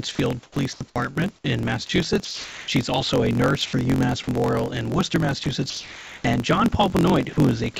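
Right from the start and all the way through, there's a block size mismatch (truncated): one stage hands over longer blocks than the next one reads, so the tail of every block gets chopped off. You hear it as a low buzz at about 45.9 Hz, which fits a 1024-sample block, and everything runs 1.07 times fast while staying at roughly normal pitch. It sits on top of a call path that tops out at 7 kHz.

The first of the sound dropped by the voice detector events comes at 0.15 to 0.19 s. The speech cuts out briefly and steady synthetic noise fills the gap. The likely cause is the sender's detector mistaking sound for background and pausing transmission.

From 0.43 to 1.18 s you get sound chopped by the voice detector. The detector likely flipped on and off more than once there, so about 360 ms ends up swapped for comfort noise in bits.

More drops follow at 1.87 s, 2.25 to 2.68 s, 5.44 s, 5.70 to 6.24 s and 7.33 to 7.37 s. 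The two longer ones each lose roughly a third of a second of speech before the sound snaps back in.

At 3.66 to 3.73 s there's comfort noise in place of the background. During that pause the real room sound, sitting about 23 dB below the loud parts, is briefly replaced by featureless generated noise. That's likely discontinuous transmission kicking in. The level stays the same, so what you notice is the texture changing, not a drop in loudness.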